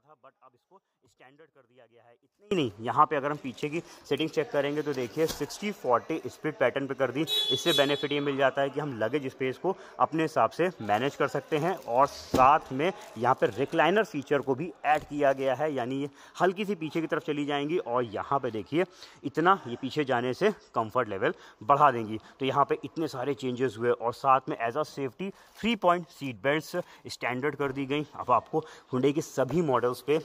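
From the start to 2.51 s, one channel sounds inverted. Summed to mono, the shared content cancels, dropping about 31 dB and leaving a faint residue. Likely a polarity flip.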